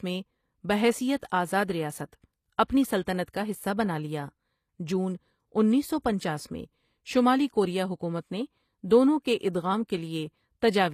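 The speech was likely passed through HE-AAC compression at a low rate, consistent with about 24 kbps, so the treble is rebuilt by copying lower bands upward rather than coded. Throughout, s sounds come out gritty and metallic, and nothing remains above 14.9 kHz.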